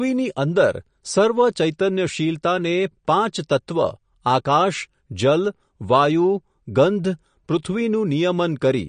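Speech that sounds watery and swirly from start to finish, with s sounds turning metallic and chirpy and consonant attacks smeared rather than crisp. Nothing is heard above about 9.6 kHz, so the top end is sharply cut off. This is plainly audible MP3 compression, likely at a low bitrate in the region of 40 kbps. Short of bits, the encoder has removed the treble and let weak frequency lines flicker on and off between frames.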